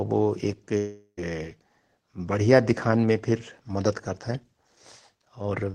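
From 0.77 to 1.19 s, likely a long network dropout: speech smears into a fading buzz, falls silent for 70 ms, then resumes with 400 ms lost.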